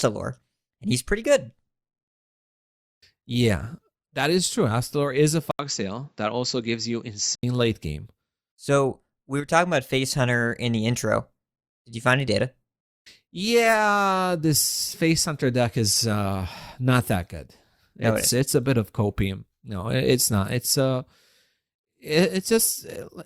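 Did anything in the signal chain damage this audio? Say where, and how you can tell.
Yes. At the driver stage, the input likely switched to a poorer device from 5.51 to 7.43 s: an 80 ms gap, then nothing above 7.6 kHz and a quieter, duller sound.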